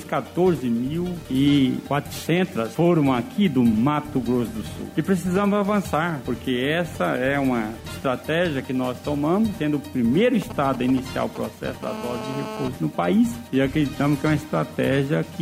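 From 10.42 to 11.85 s, GSM signalling bursts appear. A nearby 2G phone is sending short groups of radio bursts, and the audio circuit rectifies them. The result is a galloping dit-dit-dit of short 217 Hz buzzes, roughly 10 dB below the signal.

At 11.86 s, a GSM phone buzz takes over and lasts until 12.68 s. The phone is now in a call, transmitting bursts 217 times a second. The rectified pulses give a hard, raspy 217 Hz buzz with many harmonics, about 10 dB below the signal.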